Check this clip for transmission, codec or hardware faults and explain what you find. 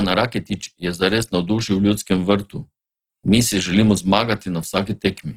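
There is one codec fault, audible throughout the speech. Opus compression is heard from start to finish: the speech sounds rough and grainy, with a noisy, fizzy texture in the upper range. The cause is likely the music (CELT) mode starved of bits, at a rate that fits roughly 16 kbps. It keeps each band's energy and fills what it cannot code with folded or noise-like content, so a spectrogram shows fullband energy but smeared, speckled upper bands with blurred harmonics instead of clean gaps.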